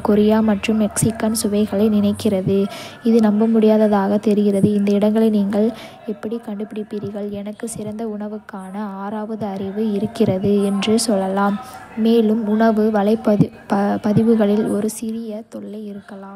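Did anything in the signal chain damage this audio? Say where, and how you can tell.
Yes, zipper noise from an unsmoothed gain stage. There's a fine ticking at 5.76–6.32 s (after "தெரிகிறது இந்த இடங்களை நீங்கள்"), 9.29–10.22 s and 14.68–15.14 s. Each time, the level jumps in 1 dB steps, about twenty a second.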